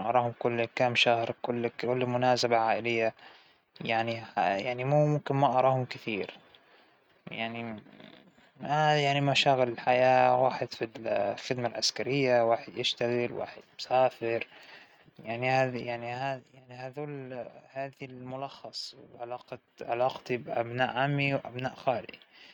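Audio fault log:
19.39–20.23 s, zipper noise: a level move of roughly 10 dB is applied in coarse unsmoothed jumps, around 40 a second, and each jump leaves a small click, so a rapid ticking rides on the speech while the gain shifts.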